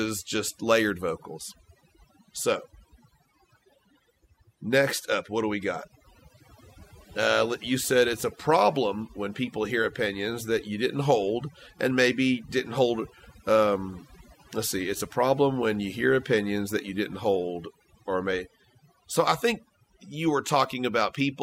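A speech recording shows overdone noise removal for its whole length. A noise reducer set too aggressively pulls individual frequency bands down or out wherever they sit close to its noise estimate. The background noise drops and breaks up into twinkling specks, and the softer parts of the voice are stripped away. A noise gate would instead mute the entire signal in pauses, without the isolated chirping remnants that mark this band-by-band suppression.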